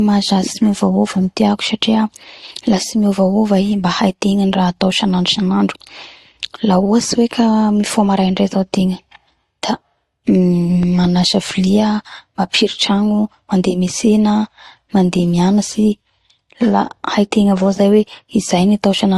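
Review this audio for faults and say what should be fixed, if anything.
Transcoding between lossy codecs, likely an MP3 stage followed by Opus, layers two sets of coding artefacts throughout the speech, with nothing above 12 kHz. To prevent it, encode once from the original source rather than re-encoding an already compressed file.

A loud pop, likely a plug, switch or static transient, lands as two sharp pops about 5 dB above the speech from 10.83 to 11.07 s, just before "vilia mapiritragno". To prevent it, secure connectors and avoid switching or handling equipment while recording.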